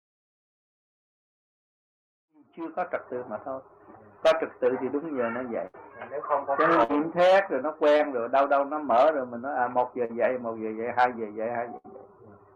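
After the smooth fade-in, which completes by 3.34 s, a burst of packet loss at 5.67 to 5.76 s and 6.84 to 6.91 s drops about 60 ms each time. The receiver extends the last sound as a decaying buzz or hiss before resuming further on.

Short concealed packet loss at 7.97 to 8.01 s and 10.05 to 10.11 s is briefer, only 20 to 40 ms. It comes across as a quick smear or wobble rather than an audible held tail.

A third burst of packet loss at 11.77 to 11.86 s repeats the longer fading fill.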